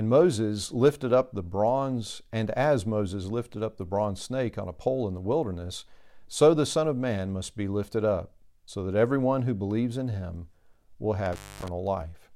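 At 11.26 s, just after "believes in him will", the speech crackles and drops out, leaving faint hiss for about 245 ms before crackling back by 11.69 s. This is an intermittent contact: a loose cable or plug briefly breaking the signal path.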